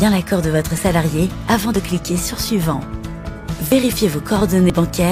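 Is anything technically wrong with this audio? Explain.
Yes. There are brief skips at 0.78, 1.76, 3.72 and 4.70 s, each losing roughly 20 ms. They fall about one second apart, except for a two-second gap between 1.76 and 3.72 s. This points to audio missing between chunks. The likely cause is a recorder handling sound in one-second blocks and dropping a sliver at each handover. The edges are butted together, so the sound jumps forward abruptly.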